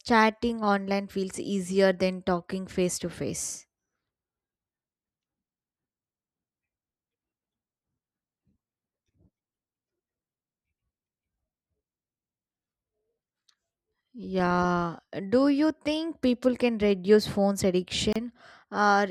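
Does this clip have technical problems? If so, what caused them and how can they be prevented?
Yes. The speech was encoded in separate pieces and joined without trimming, leaving a gap at a join of encoded pieces. Each encoder run keeps its start-up delay and last-frame padding, and here they add a silence of about 30 ms at 18.13 to 18.16 s, right after "people can reduce phones". The sound drops out with smeared edges, then resumes where it stopped. To prevent it, trim encoder delay and padding when joining, or encode the whole recording in one pass.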